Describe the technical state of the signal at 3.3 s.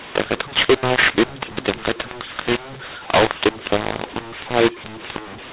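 At 3.3 s, as across the whole clip, mu-law and A-law are mixed up: mu-law coded speech decoded as A-law scrambles levels, giving harsh distortion and noise-filled pauses, unlike clipping, which spares quiet passages.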